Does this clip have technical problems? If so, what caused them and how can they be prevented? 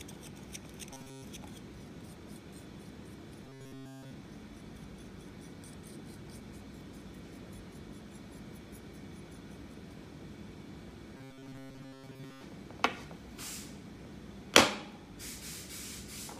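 Yes. The sound turns into a rigid, metallic buzz three times: from 0.93 to 1.24 s, from 3.44 to 4.11 s, and from 11.17 to 12.43 s. The buzz sits at a fixed 134 Hz throughout. This is robotic sound from repeated short buffers. The likely cause is audio arriving too late, so playback loops a fragment about 7.5 ms long. Most of the first and third stretches are filled this way, and nearly all of the second. Larger or adaptive buffering, with a steadier network or processing load, prevents it.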